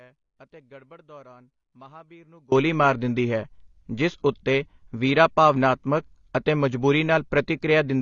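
Speech runs through the whole clip with an audio dropout to a faint residue already under way when it begins. From the start to 2.52 s the signal is missing, and only faint sound remains, roughly 25 dB below normal level. It returns abruptly with "ਮਾਰ ਦਿੰਦੀ ਹੈ ਜਿਸ", not as a fade-in. The likely cause is a break in the wanted signal while the path after it stayed live. Throughout, the audio sounds dull and smeared, with plainly audible coding damage and nothing above 7.1 kHz. This points to AAC compression, likely AAC-LC at a low bitrate around 24 kbps. At that rate the encoder lowers its cut-off and quantises the spectrum coarsely, leaving a warbling, fizzy texture on sibilants and sustained sounds.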